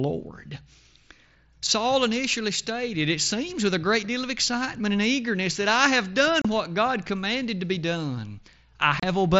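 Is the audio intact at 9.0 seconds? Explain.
No. From 9.00 to 9.03 s there's unconcealed Bluetooth headset packet loss: about 30 ms of voice packets between headset and phone went missing, which fits four lost frames, and nothing patched the gap, so you hear a short hole with abrupt edges.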